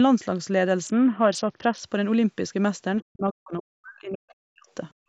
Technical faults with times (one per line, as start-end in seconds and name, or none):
0.85-1.80 Bluetooth SBC bit pool drop
3.02-4.67 speech suppressed in double talk
4.95-5.08 background gated by the echo canceller